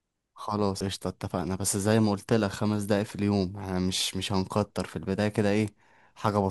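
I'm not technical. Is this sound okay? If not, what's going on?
No. At about 0.80 s there's a tiny tick, the speech cuts out for a split second, and it picks up from a different spot. That's a CD skip: a bump or a flaw on the disc made the player's laser jump to another turn of the disc's spiral.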